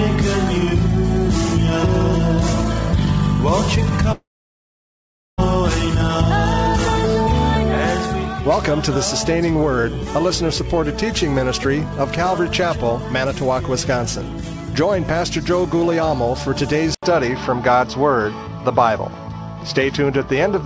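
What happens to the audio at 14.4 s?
Nothing goes wrong at 14.4 s; the sound passes through intact, carrying only the steady 8 kHz upper limit of the G.722 call path that runs through the whole clip.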